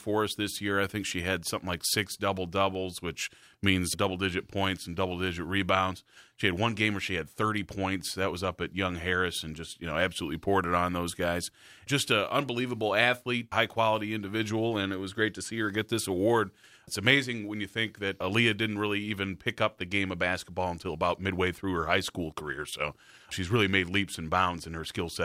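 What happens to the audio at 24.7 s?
At 24.7 s the speech carries on without any audible fault.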